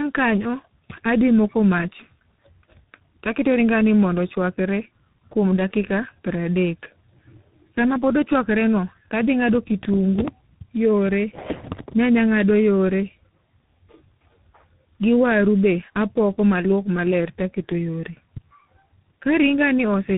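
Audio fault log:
throughout: tandem speech coding. The call passed through a G.723.1 link at 6.3 kbit/s, then G.711 A-law at 64 kbit/s, then G.726 at 32 kbit/s, so two low-rate speech coders worked in series, the second re-encoding the first one's already damaged output. Their errors stack, leaving the speech rough and warbly, and with nothing above about 3.8 kHz it also sounds muffled and narrow.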